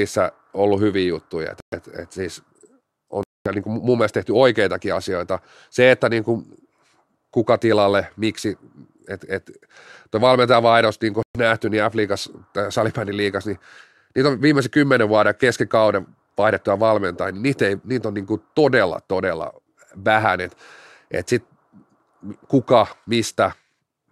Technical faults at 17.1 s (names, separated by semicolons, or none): none